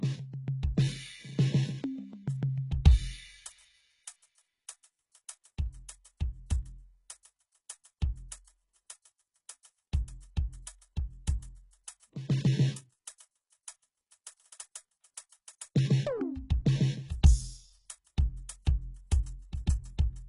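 HE-AAC compression, heard from start to finish: the music's treble sounds synthetic, and nothing is left above about 11.1 kHz. The likely cause is a codec that spends its few bits only on the lower spectrum and then fakes the upper bands by copying lower content upward under a coarse envelope. The damage is heavy, which fits a very low bitrate around 12 kbps. The rebuilt highs don't line up harmonically with the real ones, so cymbals and sibilant sounds turn gritty and metallic.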